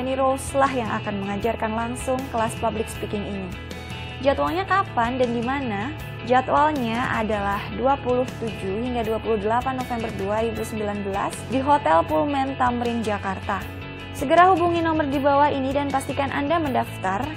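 Nothing here trips any alarms, and no faults turn up anywhere in the clip.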